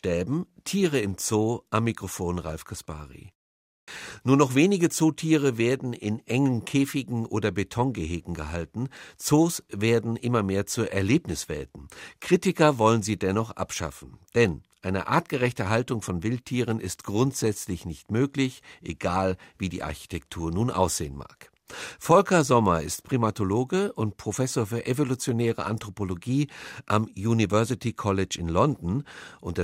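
At 3.82 s, after a pause of about 0.55 s, the speech resumes with a clipped start after a pause. The playback device seems to have dropped into a low-power state during the silence. It then needed time to wake before passing sound again. About 58 ms is swallowed, up to 3.88 s. The word after the pause therefore jumps out of silence with its opening sound missing.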